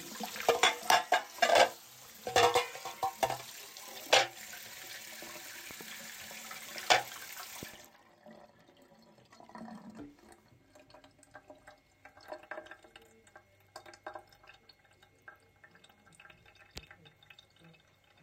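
A voltage spike, likely from a switch or static discharge, causes a loud pop as a sharp double click at 5.71 s and again at 7.63 s, each peaking about 5 dB above the sound.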